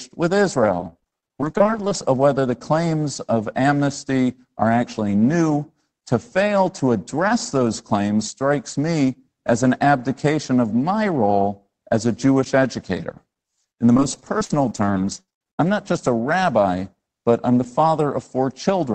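From 0.71 to 1.96 s, and again from 13.93 to 15.59 s, the speech turns choppy, with short pieces dropping out. This is repeated packet loss: audio arrived late or not at all many times in quick succession, and each hole was patched by continuing the last sound. A little over a quarter of each stretch is filled this way. The longest holes are 39 ms and 70 ms.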